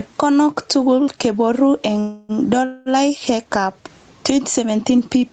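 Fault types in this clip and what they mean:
gain pumping: The gain swings by around 15 dB, so the speech sounds squashed and flat in level. The likely cause is microphone gain set far too high, with a fast limiter clamping each peak.
call audio freeze: Right after "tugul keboru eng", the sound hangs on as a fading buzz or hiss from 1.99 to 2.32 s and again from 2.65 to 2.89 s, then resumes where it stopped with nothing lost. Delayed packets likely emptied the jitter buffer, which filled the wait.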